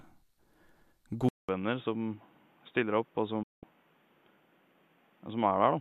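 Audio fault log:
1.29–5.81 s, input switched to a poorer device: the recording most likely changed over to a lesser microphone or a headset call profile. A 200 ms silence marks the switch, then nothing above 3.8 kHz, so the sound turns dull and boxy, roughly 5 dB quieter, over a new noise floor some 35 dB down.
3.43–3.63 s, digital broadcast dropout: the receiver stopped getting usable frames and muted until good ones returned, which points to a short run of corrupted frames. The sound fades out over 8 ms, leaving a 192 ms hole whose content is gone, then resumes.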